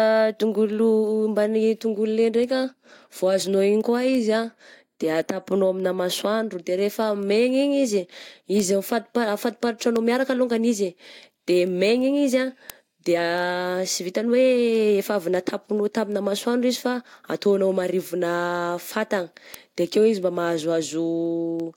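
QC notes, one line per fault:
0.39–21.60 s, word clock ticks: a string of sharp clicks recurs about every 0.3 s across the speech, around seventy in all, some louder than others. The receiving device is running on its own clock rather than locking to the sender's digital link, with a mismatch of roughly 70 parts per million. Each time the two clocks slip past each other, a sample is dropped or repeated, and the jump in the waveform is heard as a tick.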